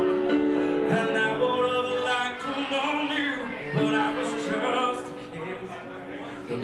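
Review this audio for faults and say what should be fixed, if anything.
Nothing needs fixing here.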